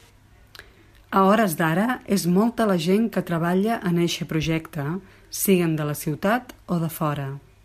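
No technical faults can be heard anywhere in the speech.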